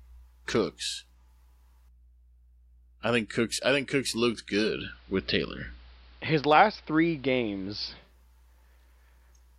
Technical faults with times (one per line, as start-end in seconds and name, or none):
4.59-8.14 digital radio blending to analogue